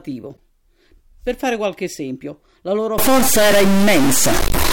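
At 0.34 to 0.38 s there's a corrupt frame decoded: a few damaged frames got played anyway, leaving a short, fairly quiet burst of energy at the wrong frequencies. Then from 2.98 s, right after "qualche esempio la loro", to the end, noise that also fills the pauses sets in, likely a stuck bit.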